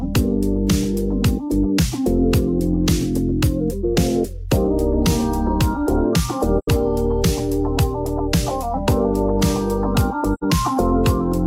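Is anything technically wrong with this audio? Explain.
Yes. There is AAC frame loss with muting, with dropouts at 6.58 to 6.68 s and 10.34 to 10.43 s. Each gap fits two lost frames zeroed by the decoder, giving a brief, soft-edged silence faded by the overlapping windows.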